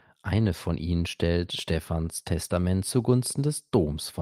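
Speech recording with no technical faults detectable by ear anywhere in the signal.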